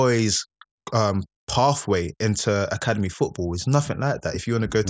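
A speech recording, and nothing in it is technically wrong.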